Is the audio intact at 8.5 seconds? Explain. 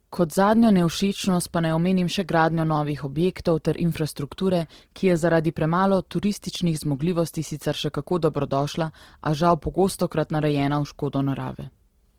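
No. At 8.5 s, as throughout, the speech sounds grainy and rough. Opus compression in CELT mode likely fills starved bands with folded noise, fitting a 16 kbps rate.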